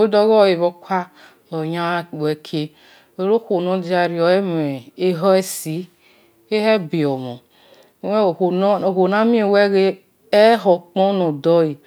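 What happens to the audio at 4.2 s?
Nothing goes wrong at 4.2 s; the speech runs on intact through that moment with no dropout, click, distortion or other audible fault.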